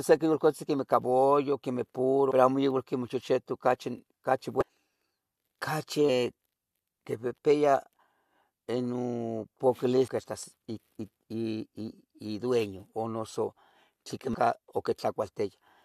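Damaged data in a compressed stream produces brief glitches at 2.30 s (after "cabullo quemeh", before "pero amo igual quemeh"), 4.61 to 4.63 s (after "igual quemeh chechetu ocachi"), 6.08, 10.07 and 14.34 s. Corrupted frames make the decoder lose sync, leaving thin broadband vertical streaks on a spectrogram and abrupt waveform discontinuities.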